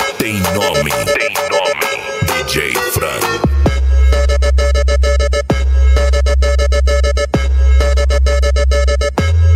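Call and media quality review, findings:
Gain pumping throughout: loud and soft parts closer in level, sound squashed, around 10 dB swing. Likely input gain too hot, fast limiter clamping each peak.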